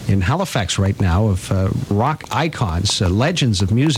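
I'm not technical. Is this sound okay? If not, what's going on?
No. Something is likely feeding stray electrical pulses into the recording, perhaps interference from nearby equipment or a faulty connection or power supply. That causes a train of clicks starting at 0.86 s and running to the end: roughly fifteen similar ticks or pops, about four per second but unevenly spaced. They stand out above the sound itself, so you hear them clearly both over it and in the quieter gaps.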